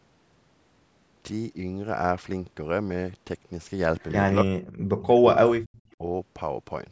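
Echo leak, 4.01 to 4.14 s: a faint copy of the speech returns about 266 ms late, very quiet against the talker, likely from a loudspeaker echo the far-end canceller failed to remove. Speech suppressed in double talk, 4.43 to 4.54 s and 4.99 to 6.03 s: the talker's speech drops out sharply, by roughly 35 to 40 dB, likely because the canceller turned down its own talker along with the loudspeaker echo while they overlapped.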